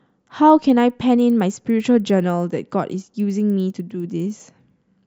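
A steady tick at 10 Hz runs through this speech clip, present only while sound is playing. This points to a resampler restarted on every block: each 100 ms block was converted from 24 kHz to 48 kHz in isolation, leaving an edge error every block. Unlike dropouts or packet loss, the rhythm is perfectly regular and nothing goes missing.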